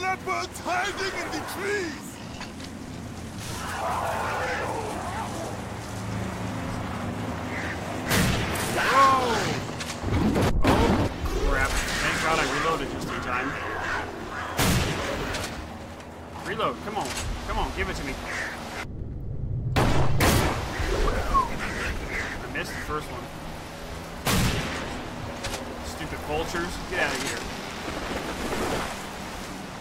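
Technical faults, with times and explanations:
No technical faults can be heard anywhere in the audio, and the signal stays steady and intact throughout.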